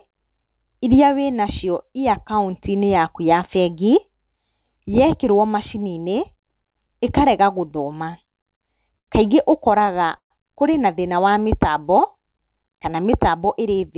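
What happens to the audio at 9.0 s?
From 8.99 to 9.09 s the speech briefly freezes: the sound at that instant is drawn out for about 89 ms with a faint buzzy, slightly dipped quality, then carries on exactly where it stopped, with nothing skipped. This is a short stall from a late packet. The jitter buffer ran dry, so the receiver stretched the last audio to cover the gap, which leaves everything after it about 89 ms later than before.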